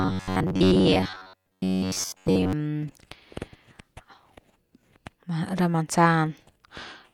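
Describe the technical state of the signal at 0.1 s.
At 0.1 s the speech has turned into a rigid, metallic buzz pinned near 94 Hz, still loosely tracing the words, from 0.01 to 2.53 s: robotic sound from repeated short buffers. Likely, audio arrived too slowly and a roughly 11 ms chunk was looped, replacing most of the real signal.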